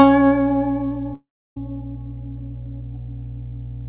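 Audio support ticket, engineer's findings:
Mains hum throughout: steady 60 Hz tone with low harmonics, about 15 dB under the music. Ground loop or nearby transformer coupling line power into the signal chain.

1.14 to 1.57 s: music breaks off, last sound smeared into a fading buzz, then about 0.3 s silence; resumes with 0.42 s missing. Likely a long network dropout, with receiver concealment.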